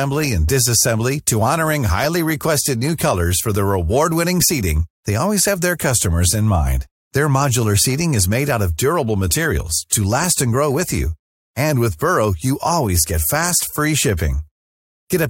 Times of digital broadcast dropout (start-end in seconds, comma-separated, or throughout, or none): none